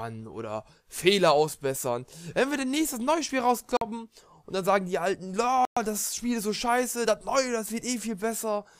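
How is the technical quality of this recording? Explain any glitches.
The recording has two dropouts, each most likely a Bluetooth stall. At 3.77 to 3.82 s and again at 5.65 to 5.77 s, held-up packets let the headphone buffer run empty, so the audio cuts to silence for about 45 ms and then 115 ms before resuming.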